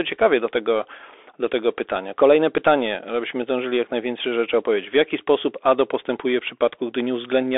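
Speech carried over a Bluetooth CVSD headset codec: the band is confined to roughly 300 Hz to 3.5 kHz, with granular hiss and scratchy, slope-overloaded sibilants consistent with 64 kbps CVSD. At 2.58 s there is unconcealed Bluetooth headset packet loss, an abrupt 7.5 ms hole consistent with one lost packet, leaving a brief gap with abrupt edges.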